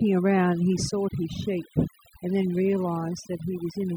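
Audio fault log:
throughout: overdone noise removal. The noise reduction is set far too aggressively, so frequency bands near its noise estimate are pulled down or cut entirely, taking the quieter parts of the speech with them. The background drops and breaks up into twinkling specks.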